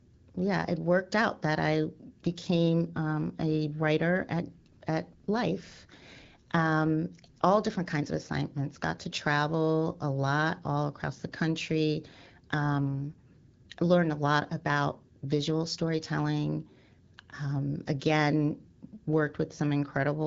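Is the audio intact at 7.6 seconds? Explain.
Yes, the speech is intact at 7.6 seconds: the AMR wideband (HD Voice) codec at 12.65 kbit/s is working normally there and leaves only light coding damage, with nothing above about 7.6 kHz.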